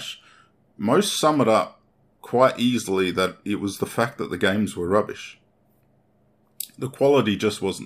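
Nothing technical stands out in this bit of speech; there are no dropouts, glitches or other faults to point to anywhere in it.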